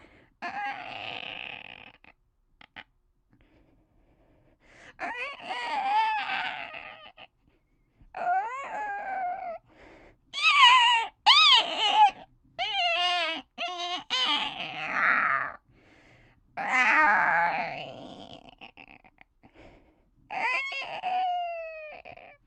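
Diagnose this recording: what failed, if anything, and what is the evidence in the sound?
Nothing failed here: listening through, no stage of the chain shows a problem, and the audio sounds just as it should.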